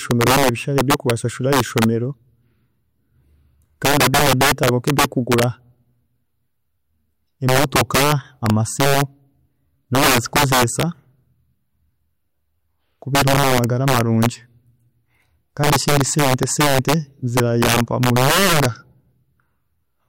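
Violent, sharp cracks burst through the loud parts of the speech at 0.11–1.11, 1.53–1.84, 3.85–5.44, 7.49–9.02, 9.95–10.83, 13.15–14.26, 15.64–16.94 and 17.37–18.66 s. This is integer overflow: peaks driven about 2 to 8 dB past the integer limit wrap to the opposite sign instead of being held at full scale.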